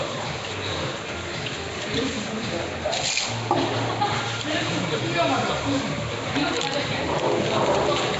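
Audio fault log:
Throughout, Nellymoser compression: the sound is rough and smeared, wrapped in a hissy halo, with nothing above 7.7 kHz and plainly audible codec damage. The likely cause is the Nellymoser Asao codec, at a rate that points to about 32 kbps. It codes short fixed blocks on a rigid bit budget, so weak bands are swapped for noise rather than dropped. That noise fill sets it apart from MP3 swirl or GSM buzz.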